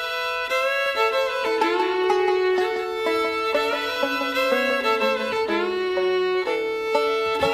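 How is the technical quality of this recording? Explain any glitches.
A doubled audio track runs from 0.86 to 5.32 s. A second, dry copy trails the original by around 200 ms at about 5 dB lower, starting and stopping abruptly. That is likely a second capture path or misaligned edit layering the same audio twice.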